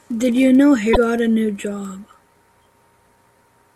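At 0.93 s the speech breaks into a brief glitch lasting about 40 ms until 0.97 s, before the audio carries on. This is damaged data in a compressed stream: part of the encoded data at that point was lost, zeroed or overwritten. The decoder either misreads those frames or rejects them, loses sync and scans ahead for the next valid frame header, producing the glitch.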